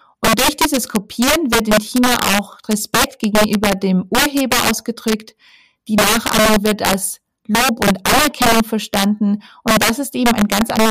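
Throughout the speech, integer overflow: signal driven about 10 dB too hot wraps around on roughly one sample in twenty, giving violent cracks, sign-flipped spikes, and broadband vertical streaks.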